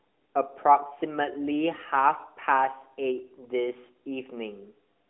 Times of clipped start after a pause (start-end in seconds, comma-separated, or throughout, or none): none